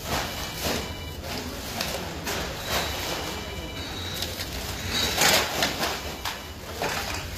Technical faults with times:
0.00-7.38 HE-AAC compression

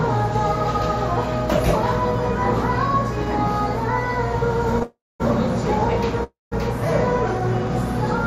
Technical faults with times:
4.83-5.22 call audio freeze
6.24-6.53 call audio freeze

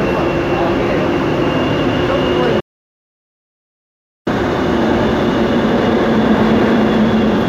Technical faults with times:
2.61-4.27 audio dropout to silence

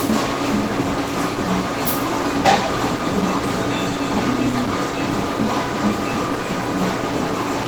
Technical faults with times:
0.00-7.67 Opus compression

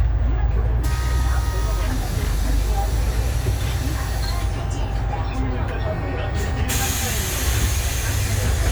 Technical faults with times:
none

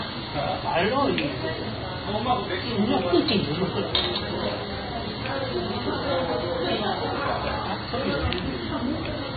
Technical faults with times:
0.00-9.36 MP3 compression

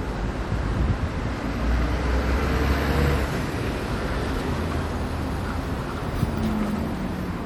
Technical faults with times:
0.00-7.45 MP3 compression

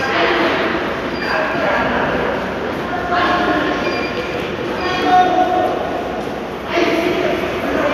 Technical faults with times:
none

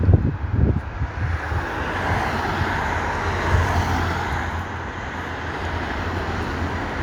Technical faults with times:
none

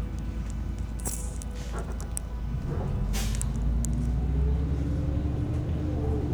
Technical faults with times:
none

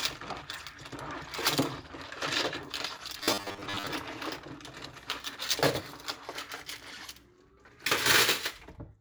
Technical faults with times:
3.18-3.87 robotic sound from repeated short buffers

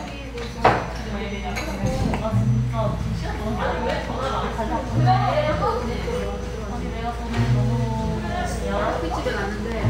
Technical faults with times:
0.00-9.89 imaging from linear upsampling

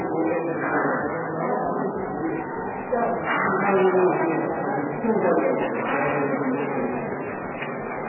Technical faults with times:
0.00-8.09 MP3 compression

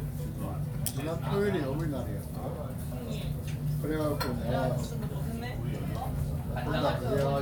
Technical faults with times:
none

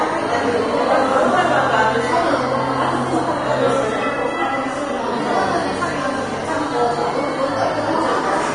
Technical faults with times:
0.00-8.55 Vorbis compression

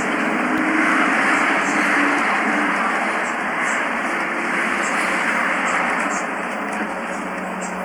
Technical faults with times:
0.58 block of digital silence

